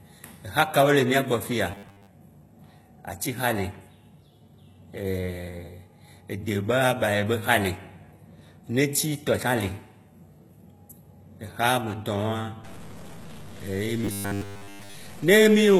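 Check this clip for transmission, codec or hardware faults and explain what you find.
There are a few problems here: codec damage throughout, two stretches of robotic buzz, and a grainy patch near the end.

Across the whole clip the speech has the sound of HE-AAC compression, likely at a low bitrate, something like 16 kbps. The treble above the coded band is rebuilt from copies of lower bands, so the s sounds come out gritty and a bit metallic.

From 1.72 to 2.07 s, and again from 14.05 to 14.95 s, you get robotic sound from repeated short buffers. Fresh audio likely wasn't arriving in time, so the same roughly 10 ms chunk was looped while most of the real signal was dropped. That imposes a rigid 100 Hz buzz over the speech.

From 12.64 s to the end there's low bit depth without dither. It sounds like the signal was truncated to around 7 bits, which leaves error noise at about -25 dB relative to the speech. 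Because that noise tracks the signal, quiet parts turn grainy and sputtery instead of sitting under a steady hiss.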